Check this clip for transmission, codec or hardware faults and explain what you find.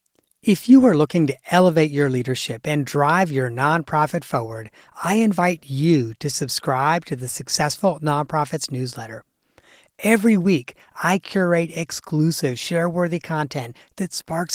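No faults can be heard anywhere in this speech.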